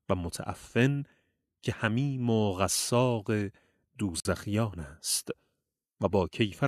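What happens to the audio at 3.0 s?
Nothing goes wrong at 3.0 s; the audio plays through that moment intact, with no dropout, click or other audible fault.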